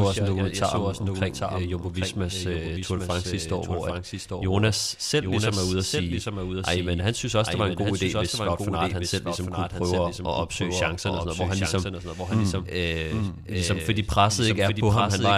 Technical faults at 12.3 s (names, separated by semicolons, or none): doubled audio track